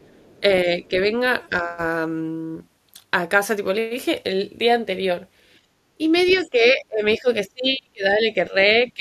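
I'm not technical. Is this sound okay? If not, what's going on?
No, there are a few problems, all linked to the echo canceller on the talker's phone or computer.

Other side's voice leaking through: from 0.03 to 0.4 seconds you can faintly hear a second person, and from 6.18 to 6.49 seconds it's clearer. That's likely the far end's voice from their loudspeaker getting picked up by the microphone and not fully removed.

Speech suppressed in double talk: the talker's own voice dips a little between 0.4 and 1.12 seconds and again from 1.49 to 1.77 seconds. From 6.35 seconds to the end it gets pushed down hard in patches, likely because both sides spoke at once and the canceller turned everything down.

Background gated by the echo canceller: from 5.59 to 5.88 seconds the room sound briefly drops away and then comes back. The canceller clamped the microphone while the loudspeaker was playing, then let go.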